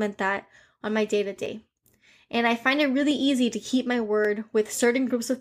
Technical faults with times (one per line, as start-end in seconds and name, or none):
1.46 dropped samples
3.11 dropped samples
4.25 dropped samples